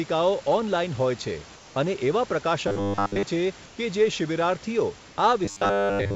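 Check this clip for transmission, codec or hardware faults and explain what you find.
Two faults appear in this speech: comfort noise in place of the background, and a robotic buzz from repeated short buffers.

Comfort noise in place of the background occurs at 1.56–1.76 s, just before "અને એવા", then at 3.66–3.78 s and 5.08–5.18 s. Each time the room background turns flat and featureless, about 1–2 dB quieter. This is likely the receiver synthesising noise during a transmission pause. Unlike a dropout, the gap is filled rather than silent.

Robotic sound from repeated short buffers runs from 2.68–3.23 s, between "અને એવા" and "છે કે", and from 5.45 s to the end. A rigid metallic buzz at 100 Hz roughly follows the speech, which fits a 10 ms buffer likely being looped while real audio is skipped. Unlike codec warble, the pitch is fixed.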